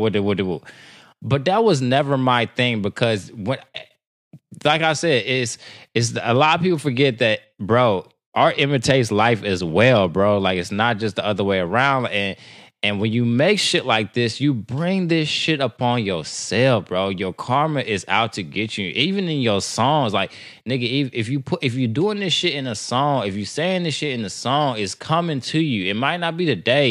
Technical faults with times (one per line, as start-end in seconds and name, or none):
9.95 corrupt frame decoded